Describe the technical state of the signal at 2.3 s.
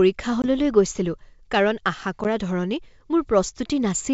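Right around there you've got packet loss on the ADPCM call, 2.24 to 2.26 s: about one packet drops to silence, the decoder's predictor loses step, and the speech comes back slightly distorted.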